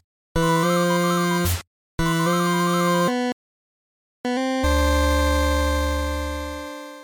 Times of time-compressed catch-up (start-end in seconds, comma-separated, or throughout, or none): 4.25-6.09